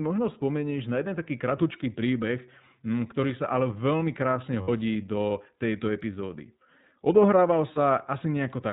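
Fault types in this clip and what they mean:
iLBC codec: The whole recording has passed through iLBC, a narrowband VoIP codec that codes each short frame's excitation independently of the previous one. The speech is intelligible but plainly rough and slightly synthetic, and everything above 4 kHz is gone. The coding points to the 20 ms frame mode. On a spectrogram, energy stops in a hard ceiling at 4 kHz.
lost iLBC frames: Two gaps in the packet stream were filled by the decoder repeating the last pitch cycle mixed with noise, heard as a held, faintly buzzy vowel. The first runs from 4.62 to 4.69 s, about 60 ms, which fits three missing 20 ms frames. The second, at 7.74 to 7.79 s, lasts about 20 ms, fitting one frame. Speech recovers at once afterward. On a spectrogram these gaps appear as flat, repeated harmonic bands. On the waveform they appear as repeated periodic cycles.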